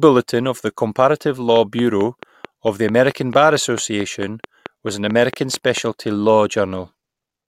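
From 1.56 to 5.78 s, a train of clicks ticks over the speech at a regular 4.5 per second, about 10 dB above it. Likely interference or a faulty connection.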